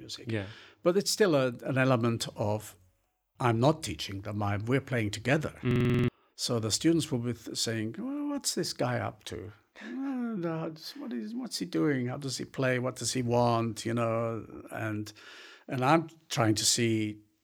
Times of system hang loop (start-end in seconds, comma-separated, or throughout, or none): 5.71-6.08